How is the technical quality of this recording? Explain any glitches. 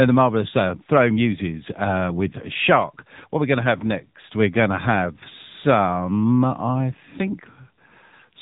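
The technical quality is limited by one fault that runs through the whole recording. The speech has passed through the AMR narrowband mobile codec, and the damage is plainly audible. Throughout the clip, nothing above about 3.8 kHz survives. The codec works at a low sample rate and rebuilds the voice from a vocal-tract model fed by a few pulses per short frame. At this low rate the sound turns buzzy and synthetic. That fits the 7.95 kbps AMR-NB mode.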